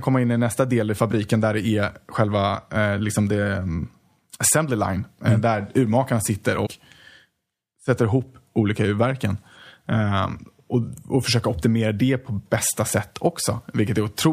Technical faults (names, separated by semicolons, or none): compressed frames skipped